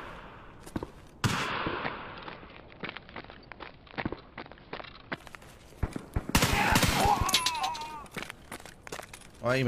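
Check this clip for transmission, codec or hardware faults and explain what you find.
There's one fault: digital radio blending to analogue, from 1.41 to 5.25 s. The receiver lost its digital stream and faded over about 118 ms to the station's AM feed, so a faint hiss appears, with no level jump.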